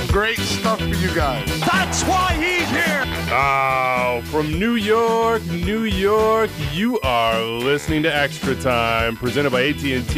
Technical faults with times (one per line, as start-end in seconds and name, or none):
0.00-10.18 USB whine